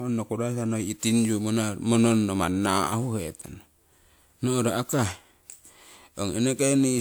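From start to finish the speech carries a swirling, smeared quality. Consonant attacks are blurred and the tone sounds hollow, worse than a 128 kbit/s stream should sound. The pattern points to generation loss, likely from a WMA-style codec run about three times over. Each decode and re-encode quantised the sound again on a shifted frame grid, so the noise piled up. The top end still reaches about 20.1 kHz.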